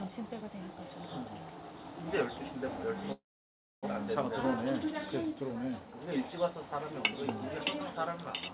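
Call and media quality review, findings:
Call audio freeze, 3.12 to 3.85 s: sound stalls, brief fading fill, then about 0.63 s silence. Likely jitter buffer underrun from delayed packets; playback resumes where it stopped, about 0.7 s later, nothing lost. Band-limited to 4 kHz throughout, fitting a G.711 call path.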